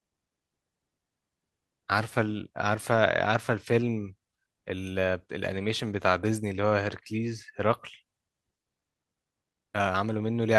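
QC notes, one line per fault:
Nothing stood out on listening to the speech in this recording.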